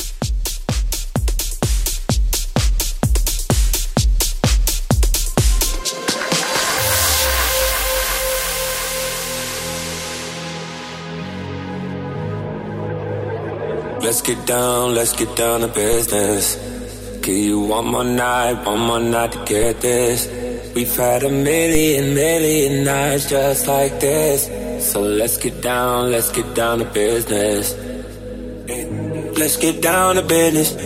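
A low thump marks each of three DC steps, at 15.93, 19.63 and 21.75 s, while the sound itself carries on unaffected. Each time, the waveform's zero line suddenly shifts, by about -10 dBFS for the first two and about -8 dBFS for the third, then drains away through a roughly 5 Hz high-pass.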